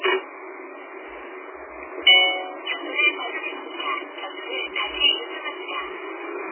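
MP3 compression, running through the whole clip of everyday sounds, is the likely cause of the heavy damage heard throughout. Nothing survives above 3.1 kHz, and the remaining detail has a watery, swirling quality as weak frequency components drop in and out between frames. Damage this severe points to a very low bitrate, on the order of 8 kbps, where the encoder discards the treble entirely and starves everything below it of bits. De-emphasis applied wrongly affects the audio from 5.32 s to the end. A treble cut intended to reverse pre-emphasis has been applied to material that had none, or applied twice, so the response tilts smoothly downward with rising frequency, about 11 dB lower at 10 kHz than at 1 kHz. That final stretch sounds dull and muffled.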